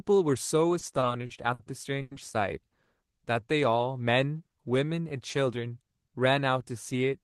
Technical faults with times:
0.79-1.62 repeated stalls (stutter)
2.01-2.14 call audio freeze
5.41-5.93 jitter buffer speed-up

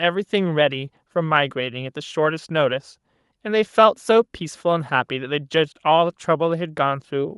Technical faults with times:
0.00-7.38 Bluetooth LC3 compression

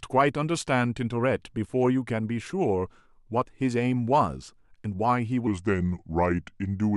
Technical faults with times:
5.47-6.97 section at the wrong speed

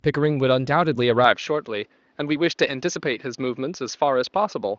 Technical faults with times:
1.24-4.79 input switched to a poorer device

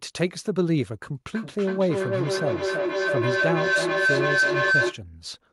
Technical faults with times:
1.30-5.03 feedback howl

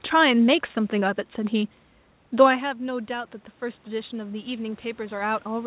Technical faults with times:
2.52-5.66 automatic gain rising

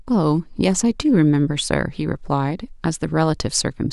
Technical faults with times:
none

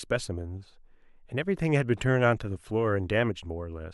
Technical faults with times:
none

